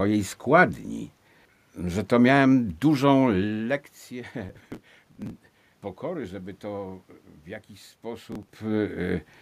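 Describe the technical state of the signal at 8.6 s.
A gritty burst of crackle tears through the speech and dies away right at this point, running from 8.32 s to 8.59 s. This is processor overload crackle: the processor fell behind and missed output deadlines again and again, likely around twenty times. Each missed block, which sounds like a buffer of roughly 3 ms, was skipped outright, leaving a tiny hard-edged gap. The rapid string of gaps is heard as the crackle.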